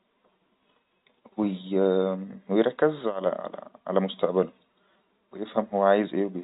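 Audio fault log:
No faults heard anywhere in this speech recording.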